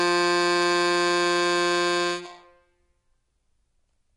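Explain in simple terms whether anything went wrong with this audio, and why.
The music sounds dull and smeared from start to finish, with nothing above 10.6 kHz and a warbly texture, most likely from heavy AAC compression.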